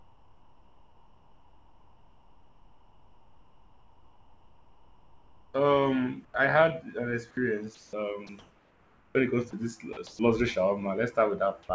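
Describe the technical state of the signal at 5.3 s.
At 5.3 s the speech sits inside a stretch of sound chopped by the voice detector, from 0.0 to 10.19 s. Gaps, about 6.8 s in total, are likely filled with comfort noise.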